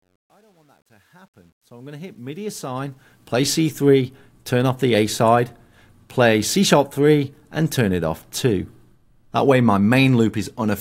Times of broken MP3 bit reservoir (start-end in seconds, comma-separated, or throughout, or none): none